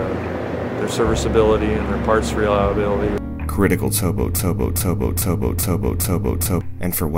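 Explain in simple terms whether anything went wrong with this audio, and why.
From 4.39 s to 6.61 s the sound gets stuck in a broken-record loop: the same 0.41 s piece plays five times back to back, and whatever should have followed is lost. The likely cause is a player or stream that stalled and kept resending its last fragment. Unlike an echo, the repeats are exact copies that don't fade.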